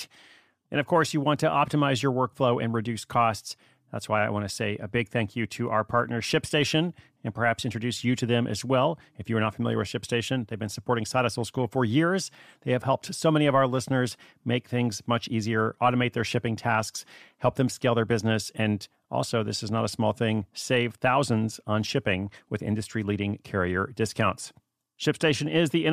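No audible technical faults.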